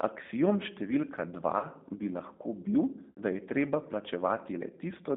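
Throughout, the speech carries G.729 codec damage: a rough, slightly synthetic texture typical of 8 kbit/s G.729, which rebuilds each frame from a vocal tract filter, a pitch predictor and a few pulses. The line band runs from 200 Hz to 3.6 kHz.

At 1.59 to 1.67 s, just before "bi lahko", VoIP packet loss concealed by the speech codec replaces about 40 ms of audio, consistent with two lost packets. The decoder repeats its last pitch and filter at falling gain, giving a brief fading smear.

At 3.11 to 3.21 s, before "da je treba", a longer gap of about 60 ms, fitting three packets, is concealed the same way. The extrapolated sound stretches further and weakens more before normal frames resume.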